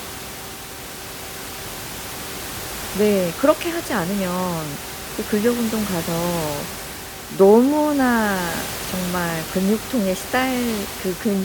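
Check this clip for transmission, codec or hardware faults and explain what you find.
Nothing stood out on listening; the room noise sits about 11 dB below the speech and belongs to the recording itself.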